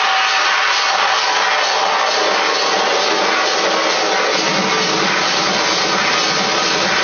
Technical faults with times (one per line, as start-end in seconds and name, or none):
none